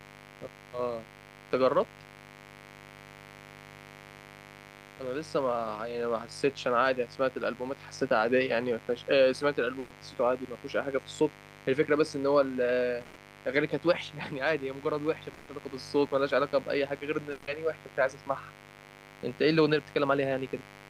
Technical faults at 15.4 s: mains buzz; burst of packet loss

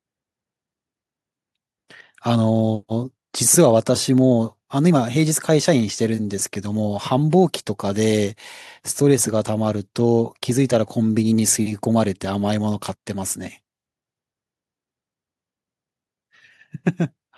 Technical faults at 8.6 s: none

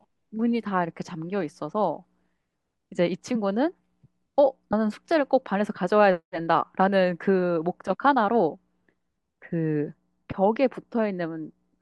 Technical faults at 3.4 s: compressed frames skipped

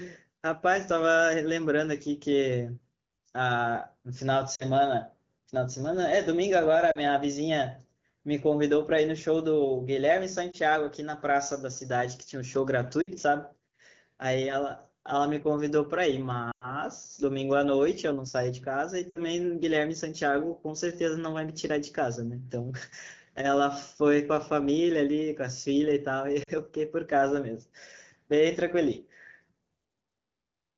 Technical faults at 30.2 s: none

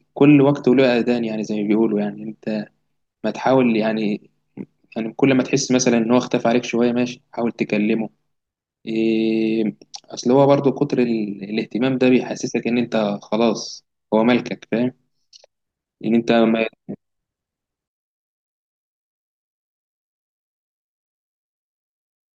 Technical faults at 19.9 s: one channel inverted

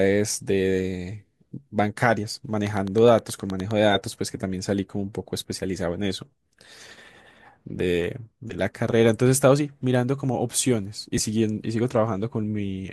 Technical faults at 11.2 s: frames out of order

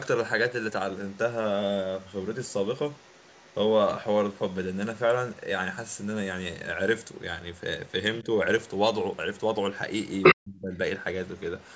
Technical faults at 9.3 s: other side's voice leaking through

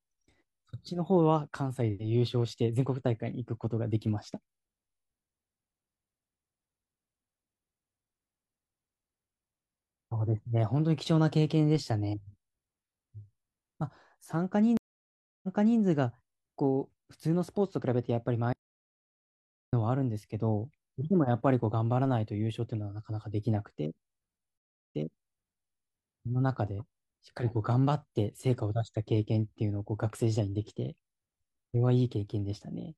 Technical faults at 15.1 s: stream reconnect

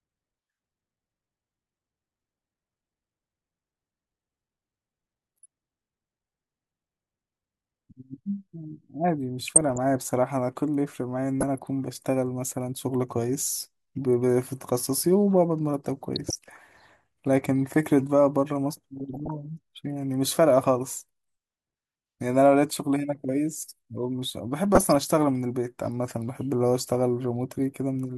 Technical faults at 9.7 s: DAB burbling

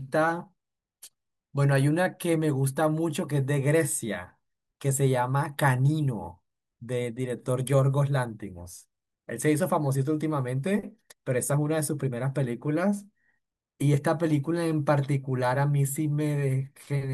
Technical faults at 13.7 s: none

